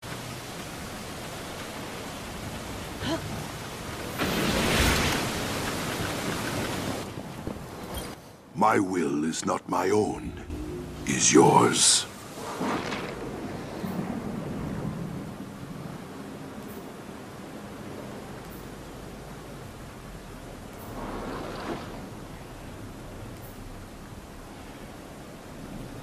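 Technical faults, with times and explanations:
8.14–10.5 s, sudden gain jump: at 8.14 s the sound and its background noise drop together by about 9 dB in one step, with no fade, and hold that lower level until 10.5 s, when both return just as abruptly. Because everything shifts at once, rather than the source simply getting quieter, the change sits in the digital chain. The likely cause is a gain setting or bit shift applied between adjacent samples without a ramp, then removed the same way.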